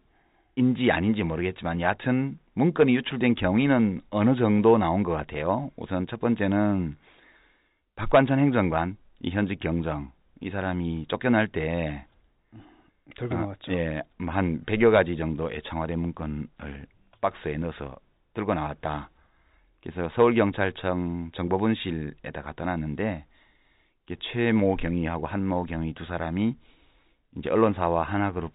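No faults detected in the speech; the narrow band topping out near 4 kHz is just the G.711 telephone path, with at most a faint trace of its level-following quantisation noise.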